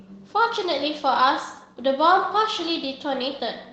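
No technical faults occur in this speech clip; it comes through an ordinary Opus call path whose high end stops at about 8 kHz.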